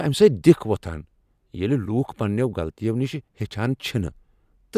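Nothing stood out as a technical problem on listening to this speech recording.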